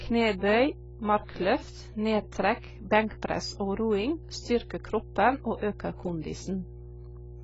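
A steady 60 Hz mains hum runs under the speech from start to finish, roughly 15 dB below it, from power-line current leaking into the signal path.

Throughout, the speech sounds dull, smeared and heavily damaged, with nothing above 7.7 kHz. This points to a low bitrate near 16 kbps, likely from AAC compression.

From 5.56 to 5.62 s, a short hiss of about 57 ms comes just before a sharp attack. This is pre-echo: the codec spread its quantisation noise across the block, into the quiet moment before the attack.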